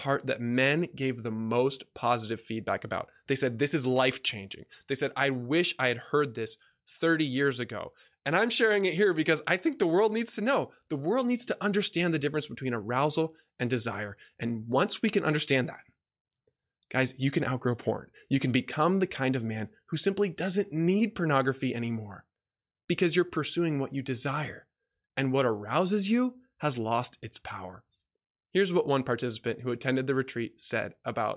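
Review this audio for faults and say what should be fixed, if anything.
No faults found, so nothing needs fixing.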